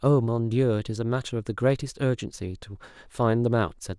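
No technical faults are audible.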